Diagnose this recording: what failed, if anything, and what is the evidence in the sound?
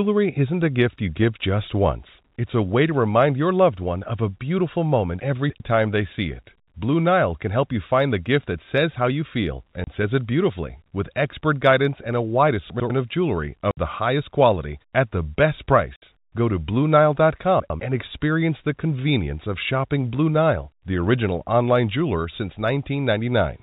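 Chunks out of order, at the buffer or network stage: a 100 ms block of speech was delivered late and played after the blocks that should have followed it. From 5.2 to 5.6 s the late block lands three blocks past its place, and at 12.7 to 12.9 s (just before "of jewelry") and 17.6 to 17.8 s (just before "and experience the convenience") it lands one block late. Nothing goes missing, but each spot sounds jumbled, with hard joins.

Packet loss filled with silence, at the network stage: lost packets were replaced with digital silence, so the speech drops out abruptly with hard edges. There is a 30 ms hole at 9.84 s, a 60 ms hole at 13.71 to 13.77 s right after "of jewelry", and another 60 ms hole at 15.96 to 16.02 s. The 60 ms gaps are exactly twice the 30 ms one, which fits 30 ms packets. The G.711 A-law telephone band underneath is heard throughout.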